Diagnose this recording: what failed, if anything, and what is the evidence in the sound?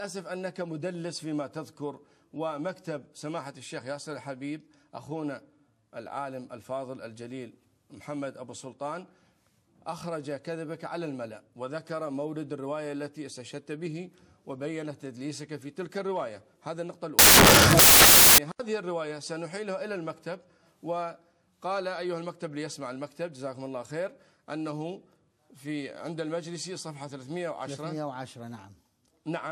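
Samples built from the wrong bytes, a sample-format conversion failure, occur from 17.19 to 18.38 s. There, loud, harsh broadband noise replaces the sound because misassembled bytes turn the rapidly varying low bits into the dominant part of each value.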